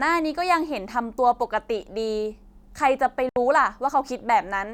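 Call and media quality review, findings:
Speech drops to silence at 3.29–3.36 s, 70 ms, resuming as if it had played on. Likely Bluetooth dropout: late packets discarded, gap fits three packets.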